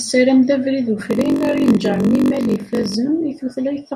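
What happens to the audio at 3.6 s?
At 3.6 s the speech carries on cleanly, with no dropout, click, distortion or other fault at that point.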